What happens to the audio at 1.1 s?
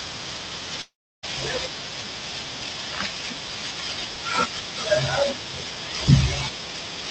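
At 1.1 s there is near silence. From 0.81 s the last sound smears into a fading buzz, then dies away until audio resumes at 1.25 s with a chunk missing. The likely cause is a long network dropout, with the receiver concealing the gap.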